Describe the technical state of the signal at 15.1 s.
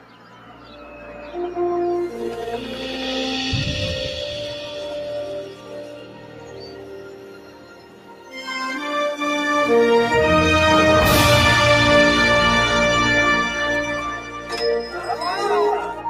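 At 15.1 s, sound is cut by the noise suppressor from 14.84 to 15.15 s. It mistakes this sound for noise and pulls it down by about 7 dB, so it sinks in level. Throughout the clip, a noise suppressor applied to music or sounds treats steady tones and tails as noise. Its gain swings by around 10 dB, so held sound pumps and thins while attacks pass.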